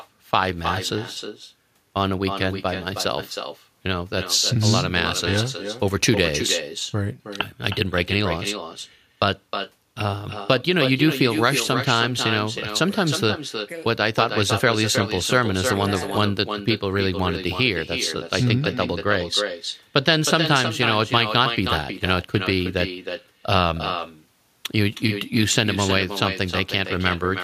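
Throughout, the speech carries echo with no canceller: the far end's microphone picks up its loudspeaker and nothing removes it, so each phrase returns about a third of a second later, about 7 dB down, as a distinct repeat rather than a smoothly decaying room tail.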